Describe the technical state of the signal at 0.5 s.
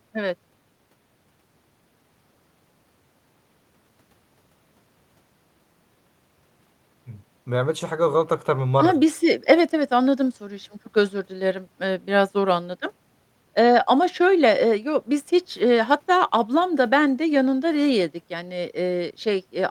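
The signal at 0.5 s is intact, with no fault audible at that moment.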